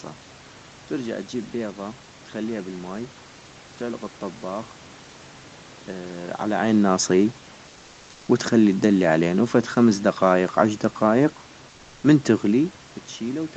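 A speech clip in which, from 7.69 to 8.27 s, between "على عين ناصيي" and "وتخلي الدلي علينو فد", comfort noise in place of the background replaces the real room sound for 580 ms, likely from Opus DTX. Unlike a dropout or gate, the gap holds steady, featureless noise at nearly the same level, only about 1 dB quieter.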